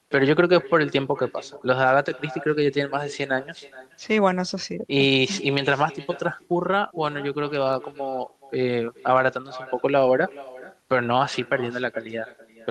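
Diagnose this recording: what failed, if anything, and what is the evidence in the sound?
The failure is at the call-processing stage: echo with no canceller, present through the whole clip. Each phrase of speech returns as a distinct, quieter copy about 19 dB down, arriving roughly 0.4 s later, thinner than the original. The far end's loudspeaker output is reaching its microphone and being sent back over the network unremoved. Room reverberation would smear into the original as a decaying tail. This echo is a separate delayed repeat, and its delay matches a network round trip.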